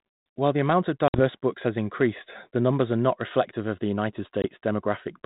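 Packet loss on an ADPCM call cuts in at 1.08 s, after "the amount of", and again at 4.42 s. About 60 ms, then 20 ms, drop to hard-edged silence. The decoder's predictor falls out of step, so the sound returns briefly distorted before "books has increased the".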